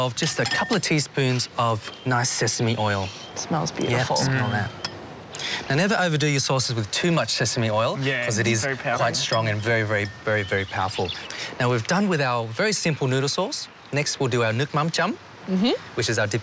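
No technical faults can be heard anywhere in the clip. Nothing in the audio calls for a timestamp or a closer look.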